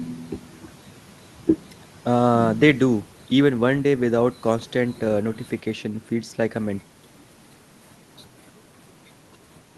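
No technical faults can be heard in this speech.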